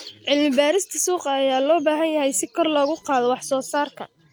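From 2.6 s to the end at 4.3 s, computer activity noise rides under the speech: a faint buzzing chirp, about 35 dB below the voice, from computer load changes shifting the shared audio ground. A spectrogram shows a comb near 1 kHz that comes and goes, unrelated to the speech.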